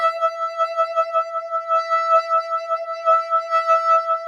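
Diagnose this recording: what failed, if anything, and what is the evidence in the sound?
A speech noise suppressor in the call-processing chain has been left running on music. It treats sustained tones and ambience as noise, so the level swings by around 10 dB. The waveform envelope pumps, and on a spectrogram held partials and reverb tails fade unevenly while attacks stay bright.

The suppressor also cut specific passages it mistook for noise, from 0.31 to 0.58 s, 1.25 to 1.52 s and 2.43 to 2.7 s, with drops of about 4 dB. These appear as shallow dips in the waveform envelope and dimmed bands on the spectrogram, where sustained content sags and its decay ends early.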